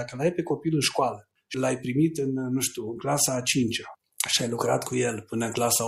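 No dropouts, clipping, glitches or other technical faults turn up anywhere in the recording.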